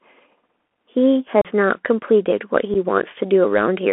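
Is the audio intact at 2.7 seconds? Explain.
No. At 2.74 s a couple of voice packets between headset and phone were lost with no concealment, so about 7.5 ms of audio simply drops out. This unconcealed Bluetooth headset packet loss leaves a brief hole with hard edges that can click, and the speech returns quieter for an instant.

That moment also carries the Bluetooth CVSD headset codec, which codes each sample as a single up-or-down bit, a scheme that fits a 64 kbps link. The band is limited to roughly 250 Hz to 3.4 kHz, and the coding plainly distorts loud high sounds, roughens s sounds and leaves a grainy hiss beneath the speech.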